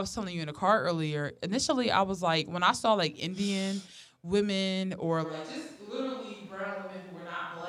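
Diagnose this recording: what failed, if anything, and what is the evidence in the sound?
Capture stage: from 5.26 s, after "women or", the speech turns suddenly roomy, thin and about 10 dB quieter to the end, likely a switch to a distant microphone.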